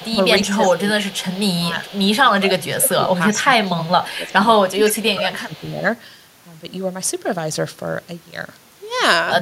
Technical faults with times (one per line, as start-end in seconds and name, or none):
0.00-1.08 speech suppressed in double talk
0.00-2.60 echo leak
1.69-5.86 speech suppressed in double talk
3.41-5.62 echo leak